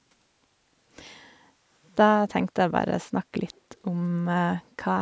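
An echo leak appears from 3.55 to 3.61 s: a brief, very faint delayed copy of the speech, trailing the original by about 0.22 s and sitting far below it in level. It likely comes from a far end playing the call over a loudspeaker, where the echo canceller failed to fully suppress what its microphone picked up and sent that residue back. Beneath the call microphone processing's 8 kHz ceiling, the scrap registers as a faint ghost behind the voice.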